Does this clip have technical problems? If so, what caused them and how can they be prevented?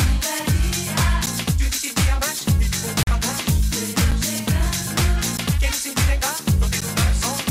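Yes. Ticks at 1.26, 4.11, 5.37 and 6.81 s and a brief hole from 3.03 to 3.07 s are blocks of digital silence, likely where output buffers went unfilled and abruptly dropped to silence. Giving the audio thread larger buffers or higher scheduling priority prevents these missed deadlines.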